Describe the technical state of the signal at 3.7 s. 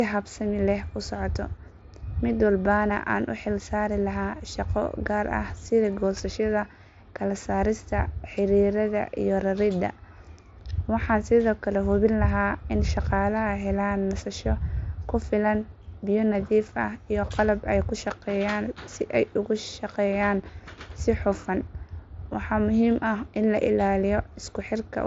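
At 3.7 s the speech is intact, carried through the Bluetooth mSBC headset codec with its band ending near 7.7 kHz and no fault at that moment.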